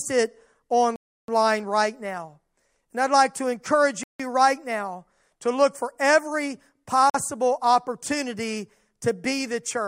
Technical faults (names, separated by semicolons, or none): Bluetooth stall